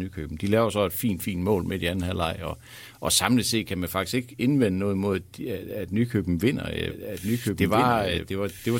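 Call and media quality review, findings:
Doubled audio track, 6.90 s to end of clip. A second full-band copy of the speech enters abruptly, trailing the original by about 1.5 s at roughly equal loudness, with no decay or room colour. Probable component: capture or mix stage, likely a second, slower capture path feeding the same output, so two out-of-step copies overlap.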